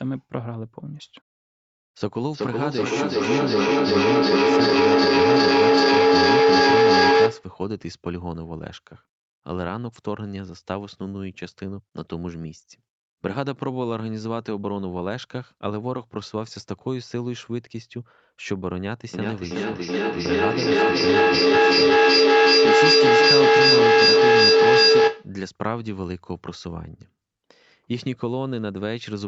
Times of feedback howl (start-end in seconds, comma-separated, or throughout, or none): 2.32-7.55, 19.14-25.38